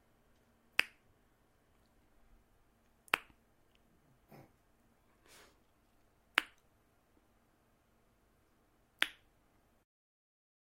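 At 4.97 s there is a skip ahead: roughly a fifth of a second of sound never reaches the listener, and playback jumps straight from the material before it to the material after it with no silence or fill between. That is what separates it from a dropout, which leaves an audible gap or muted stretch. Here the audio simply lurches forward, and events seem to arrive early, because a chunk of audio was dropped, either on the way or by an overflowing jitter buffer, while later audio was already waiting.

From 5.54 to 6.03 s the jitter buffer speed-up follows. The receiver was still holding more audio than it wanted, so it shaved out many tiny slices, each one or a few pitch periods long, adding up to around 50 ms. Over that half second the sound runs at about 109% speed and feels briefly rushed. Unlike a resampling or tape-speed error, the pitch does not rise. Only the timing tightens, and unlike the skip, nothing goes missing in one noticeable jump.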